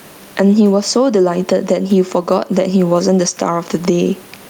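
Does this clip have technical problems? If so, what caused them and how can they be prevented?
Yes. Gain pumping runs through the whole speech clip: the gain swings by roughly 15 dB, the room noise sits about 38 dB below the speech, and the speech itself sounds squashed. The likely cause is input gain set far too high, with a fast limiter or compressor clamping down on each loud sound and releasing in the gaps. To prevent it, lower the input gain and use a gentler compressor with a slower release.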